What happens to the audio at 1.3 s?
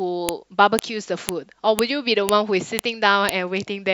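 At 1.29 s there's a sharp, loud click cutting through the speech. That's a file header played as audio: WAV pieces were joined without stripping the header of the piece starting here, so those few dozen header bytes play back as samples and snap out regardless of the signal.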